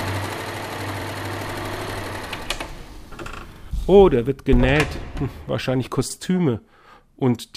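Short stutters at 1.02, 3.56 and 6.10 s replay 44 ms of audio. These are overlapping chunks: each 2.5 s chunk starts before the previous one ends.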